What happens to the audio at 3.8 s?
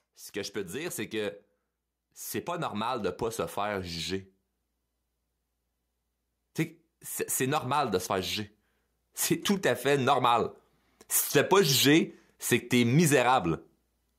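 At 3.8 s the speech is near the end of an automatic gain rising event that runs from 2.44 s to 3.98 s. The gain control judged the input too quiet and stepped its gain up gradually over that span of about 1.5 s, adding about 4 dB in total. Because the whole signal is amplified, the voice and the background noise swell together, and the level settles at the higher setting just after 3.8 s.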